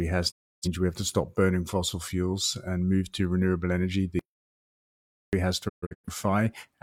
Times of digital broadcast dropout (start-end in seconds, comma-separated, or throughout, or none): 0.30-0.67, 5.68-6.09